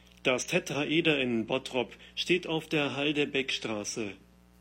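Speech clip with a steady, raspy mains buzz throughout, built on 60 Hz and its harmonics and sitting roughly 30 dB below the speech, caused by switching spikes leaking in from a dimmer, rectifier or poor shielding. At 0.42 s a brief blip marks damaged data in a compressed stream, where corrupted bytes made the decoder misread a frame and lose sync.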